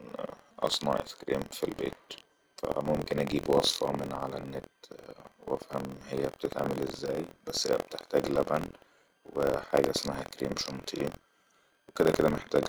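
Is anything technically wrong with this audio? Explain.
Yes. Throughout the speech there is a rough, robotic buzz at about 43 Hz that rides on the audio and drops away in the gaps where nothing is sounding. This is buffer tearing: the software filling a ring buffer and the hardware draining it have drifted until they overlap within each period. A slice of every buffer, around a tenth of it, replays audio from roughly 70 ms earlier, with hard joins at both edges. The 43 Hz repeat fits a 1024-sample buffer.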